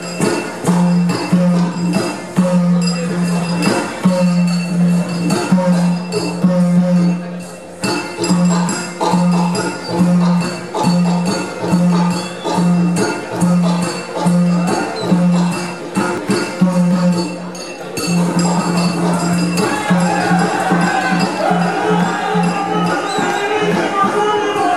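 At 16.18 s there is a very brief blip from damaged data in a compressed stream. Corrupted data made the decoder misread a frame and lose sync. It then hunted for the next valid frame header. The sound breaks into a short glitch.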